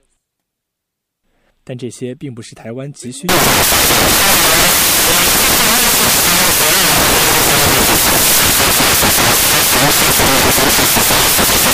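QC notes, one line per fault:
3.29 s to the end: samples built from the wrong bytes. From here the reader is stitching each sample's bytes together wrongly, so the jittery low bits land in the loud end of every value, giving harsh, loud broadband noise.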